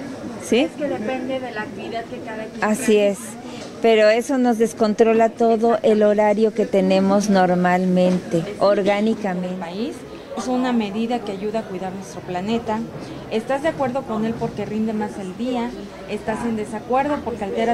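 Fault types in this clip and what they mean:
Compressed frames skipped: at 10.36 s the audio jumps ahead by about a fifth of a second, roughly seven whole frames of about 26.1 ms each. Unlike a dropout, no silence is inserted and the timeline simply closes up.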